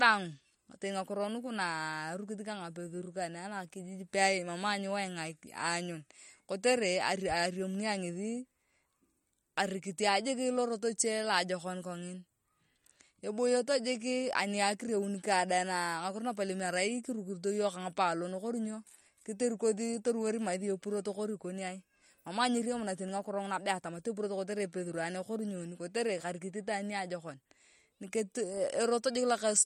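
Throughout the speech, MP3 compression damage is plainly audible: watery, swirling sibilants and smeared attacks, likely from a starved bitrate that fits around 48 kbps. A spectrogram shows nothing above 16.6 kHz and flickering holes where weak frequency lines drop out frame to frame.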